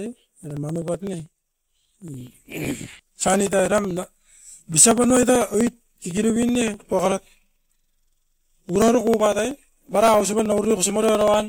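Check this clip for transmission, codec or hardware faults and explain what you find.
The speech carries one hardware fault, periodic USB or driver dropouts, running from 0.06 s to 11.40 s. Every 0.063 s, about sixteen times a second and nearly two hundred times in all, roughly a millisecond of audio is skipped outright. A background task stalls the USB bus or audio driver on a fixed cycle, so samples are dropped and the waveform jumps. You hear a steady ticking under the speech, silent in pauses. Its strict even spacing is what distinguishes it from random network packet loss or scattered clicks.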